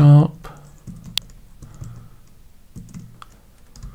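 At 1.18 s, a sharp snap sits on top of the sound. This electrical switching spike likely came from a nearby switch arcing.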